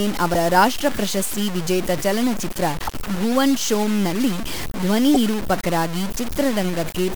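Throughout the speech there is a coarse, gritty distortion that rises and falls with the voice. Unlike steady hiss, it follows the signal. This is likely low bit depth without dither, truncated to about 4 bits, putting the error roughly 10 dB below the speech.

Damaged data in a compressed stream produces brief glitches at 0.33–0.35 s just before "ರಾಷ್ಟ್ರ ಪ್ರಶಸ್ತಿ ವಿಜೇತ ಚಲನಚಿತ್ರ", at 2.84–2.89 s before "ಭುವನ್ ಶೋಮ್ ನಲ್ಲಿ ಧ್ವನಿ", and at 5.11–5.16 s after it. The decoder misreads corrupted frames and resyncs at the next frame header.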